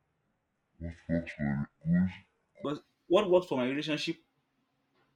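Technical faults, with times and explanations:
0.00–2.65 s, section at the wrong speed: the opening stretch of speech runs at 0.568 times its proper rate, so it sounds slow and heavy and sits roughly ten semitones below normal. Pitch and tempo drop together rather than one alone. The likely cause is a playback or editing step clocking this segment too slowly. At 2.65 s, just before "what works for my", the speech snaps back to its natural speed and pitch.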